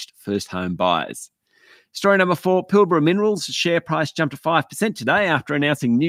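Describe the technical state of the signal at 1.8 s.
At 1.8 s the signal is intact, with no audible fault at that moment.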